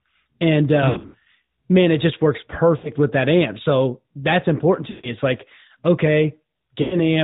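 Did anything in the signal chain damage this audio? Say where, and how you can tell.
Yes, at the codec stage. The whole clip is AMR narrowband mobile codec audio, with a hard ceiling at 4 kHz and a buzzy, synthetic edge to the speech. The damage is plainly audible and fits a mid-rate mode around 10.2 kbps.

Lost AMR speech frames come from the radio or network side. The worst is 0.90 to 1.16 s, just before "man it just works": scattered dropouts that add up to about 200 ms over 240 ms, the longest lasting 80 ms. There are also shorter dropouts between "man it just works" and "with that amp" (2.78 to 2.90 s), after "that's important" (4.90 to 5.16 s), and at 6.82 to 6.96 s. Each time, the decoder stretches the last good frame and fades it.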